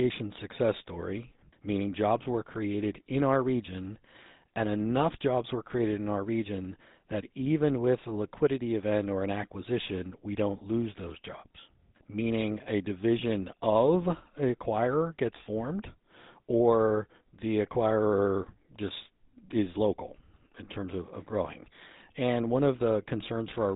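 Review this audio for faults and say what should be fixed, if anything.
A buzzy, gravelly roughness and nothing above 3.8 kHz run through the whole speech clip, the damage of the GSM full-rate codec, which fits 13 kbps. Keep the recording path off GSM telephony, or use a wideband codec.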